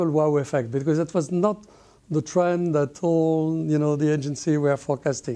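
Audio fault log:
No faults were heard in this clip. Nothing in the audio calls for a timed entry in this log.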